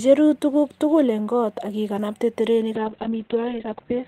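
A call bitrate drop begins at 2.76 s, right after "eng koot ak iganabte", and lasts until the clip ends at 4.1 s. The connection's bandwidth estimate fell, so the encoder was pushed from 32 kbps down to 6 kbps, bottoming out for about 1.04 s. At that rate the codec quantises coarsely and narrows the audio band from 20 kHz to 4 kHz, so the speech turns muffled and rough, with a watery, smeared texture.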